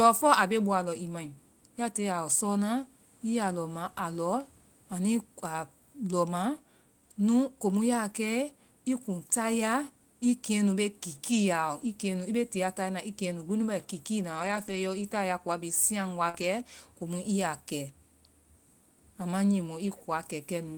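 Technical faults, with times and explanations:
11.81–11.87 s, 14.35–14.77 s, 16.33–16.43 s: lost packets rebuilt from error correction. The decoder played low-bitrate backup copies, so there is no gap, but the sound is rougher and noisier, with grainier, smeared bands on a spectrogram.
16.29–16.36 s: short concealed packet loss. About 40 ms never arrived in time and was filled by extending the preceding sound, heard as a brief smear. It shows as a repeated, flattened waveform stretch and blurred harmonics.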